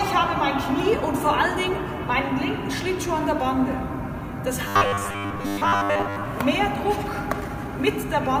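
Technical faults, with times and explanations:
4.68 to 6.26 s, robotic sound from repeated short buffers: a rigid 100 Hz metallic buzz, likely from a 10 ms fragment looped through most of the passage.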